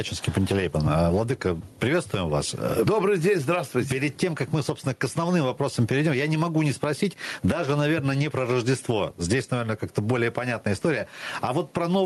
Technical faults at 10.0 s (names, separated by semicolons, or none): gain pumping